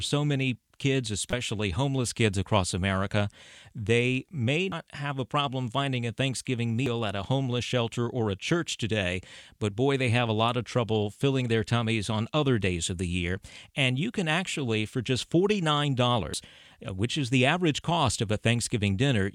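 At 1.31 to 1.33 s, then 4.72, 6.86 and 16.34 s, the speech breaks into brief glitches. This is damaged data in a compressed stream. Corrupted bytes make the decoder misread frames and lose sync until it finds the next valid header.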